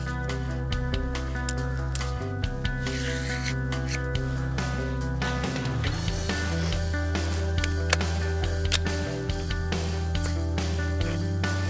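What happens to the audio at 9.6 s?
At 9.6 s the audio is intact; nothing happens there beyond the call path's ordinary band limit, with nothing above 8 kHz.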